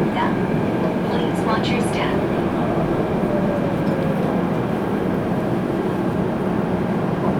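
A recording of everyday sounds, with nothing technically wrong with it.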